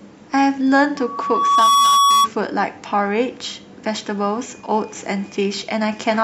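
Loudspeaker feedback squeal runs from 0.96 to 2.29 s in this speech clip. A single 1.1 kHz tone swells over roughly 0.7 s to sit about 5 dB above the speech. The microphone is picking up its own loudspeaker, and the loop gain exceeds unity at that frequency.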